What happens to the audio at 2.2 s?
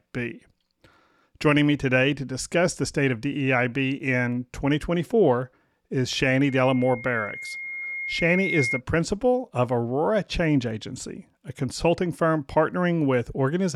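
Nothing goes wrong at 2.2 s: the speech there plays through intact, with no dropout, click, distortion or other fault.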